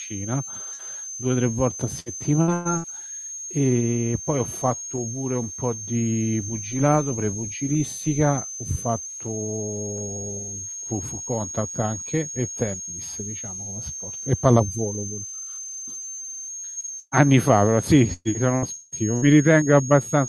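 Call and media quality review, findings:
Switching supply whistle, throughout: a switch-mode power supply is running in audible burst mode or beating against another supply. The result is a high whistle wandering between 6.2 and 6.7 kHz, about 10 dB below the speech and present under all of it. The pitch drift follows load changes on the supply. Suspect a switch-mode power supply near the signal path.

Burst of packet loss, 0.73 to 0.84 s, 16.70 to 16.79 s, and 16.99 to 17.14 s: consecutive packets were dropped or arrived too late, so the jitter buffer concealed each hole by extending the last sound and fading it. About 60 ms of speech is lost in the first two, with roughly 11 ms of extra length added at 0.73 s. At 17.0 s about 120 ms is lost, and the fade reaches full silence for about 40 ms before the audio resumes further on.

Repeated packet loss (robotic sound), 2.00 to 2.87 s and 18.13 to 19.25 s: loss recurs across each span, with four holes per span, each patched before the next one hits. 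The first span loses about 300 ms, with the longest hole 115 ms and about a third of the span concealed. The second loses about 420 ms, with the longest hole 174 ms and about 37% concealed. Both spans sound choppy, with pieces of speech missing. Check the network path and jitter buffer.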